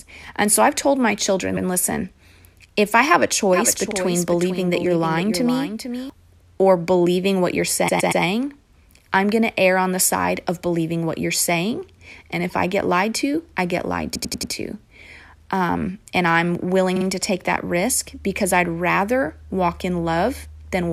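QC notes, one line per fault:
1.56–1.65, 3.90–3.95, 7.87–8.22, 14.14–14.51 and 16.95–17.05 s, repeated frames: the speech stutters. After "I've told my children" a 92.9 ms block plays twice. At 3.90 s a 46.4 ms block plays twice. At 7.87 s a 116.1 ms block returns three extra times. At 14.14 s a 92.9 ms block returns four extra times. Between "and I'm" and "to take that risk" a 46.4 ms block comes back twice. Each time, the same run of compressed frames reached the decoder more than once, lengthening the audio by the repeated time.
3.53–6.10 s, doubled audio track: starting abruptly after "if I have a", a full-band second copy of the speech trails about half a second behind and about 10 dB down. It is dry, with no decay or room colour, so it sounds like a pasted echo rather than reverb. It cuts off sharply just before "or believing what you're". The likely cause is the same signal being mixed in twice, with one copy arriving over a slower path or left out of step in an edit.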